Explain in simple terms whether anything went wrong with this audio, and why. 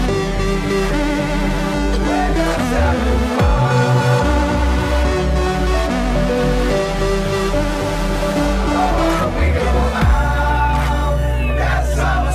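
Nothing went wrong here: the audio holds steady the whole way, with no dropouts, glitches or other technical trouble to be heard.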